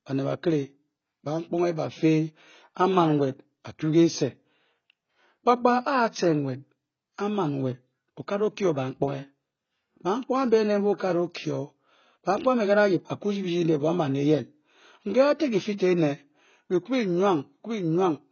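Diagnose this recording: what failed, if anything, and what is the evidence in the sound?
The codec stage is at fault. Throughout the speech the sound is dull and smeared, with a fizzy, warbling texture on sibilants and sustained vowels, and nothing is present above 6.6 kHz. This is heavy AAC compression, likely AAC-LC at a low bitrate around 16 kbps. The encoder starves the upper bands and coarsely quantises the rest. A spectrogram shows a hard ceiling at 6.6 kHz, with patchy holes and blotchy noise fill below it.

Pre-echo, also from the codec, appears at 15.78 to 15.80 s, where a brief hiss smears across roughly 20 ms just before a sharp attack. The transform spreads its quantisation noise evenly across the block. The noise budget set by the loud onset therefore leaks into the quiet moment ahead of it and softens the attack. The waveform shows noise before the transient, and the spectrogram shows a broadband smear preceding the onset.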